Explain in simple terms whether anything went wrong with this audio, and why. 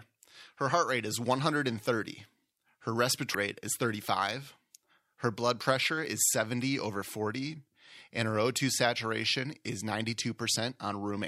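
Damaged data in a compressed stream shows up at about 3.34 s in this speech clip, as a very brief glitch. The audio was stored in a compressed format, which the player must unpack piece by piece. At that moment a small stretch of the stored data was corrupted, so the player could not read it properly, lost its place, and had to hunt for the next readable section before carrying on.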